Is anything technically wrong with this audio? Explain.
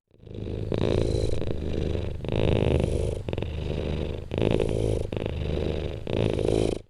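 Yes. Channel delay (doubling) runs through the whole clip: one channel arrives about 92.9 ms behind the other, which fits a 4096-sample buffer, and the two are then summed to mono. The gap is too long to blur into the original, so the late copy is heard on its own at equal level. Every onset and transient is followed by a distinct slap echo, giving the sound a doubled, stuttering edge.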